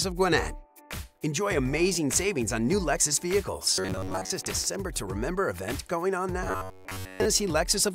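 From 3.74 to 4.30 s, and again from 6.48 to 7.25 s, the audio takes on robotic sound from repeated short buffers, a rigid metallic buzz at 93.8 Hz. The likely cause is audio arriving too seldom, so a roughly 10.7 ms chunk is looped over most of each stretch while real audio is skipped.

Between 4.45 and 5.59 s a train of clicks appears, about four sharp pops of similar shape, irregularly spaced at about 2.64 per second and roughly as loud as the sound itself, likely from interference or a faulty connection.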